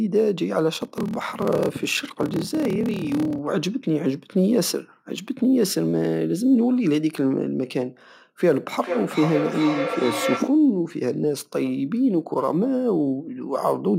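Speech, with a block size mismatch (padded) from 0.72 to 3.40 s: short zero-filled gaps in every block give a 38.3 Hz buzz, and the speech runs at 0.889 times normal speed with timbre unchanged, which fits 1024-sample blocks read into larger ones. From 8.8 to 10.67 s there is feedback echo between two devices: speech returns at intervals of roughly 400 ms, thinner and more ringing each pass, reaching about -3 dB relative to the direct speech, because a second device replays the call into the microphone.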